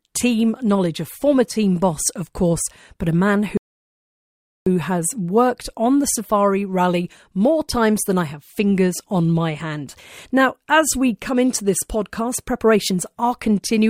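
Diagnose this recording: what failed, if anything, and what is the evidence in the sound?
The speech drops to dead silence at 3.57 s and picks up cleanly at 4.67 s with "has worked on the", nothing skipped. This is a rebuffering stall at the playback stage: the streaming player's buffer ran dry and waited for data, inserting about 1.1 s.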